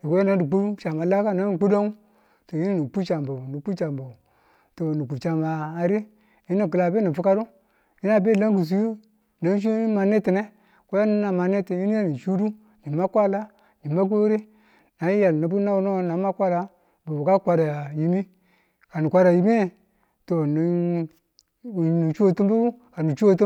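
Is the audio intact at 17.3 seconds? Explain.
Yes, at 17.3 seconds the speech is intact, with no dropout, glitch or other fault at that moment.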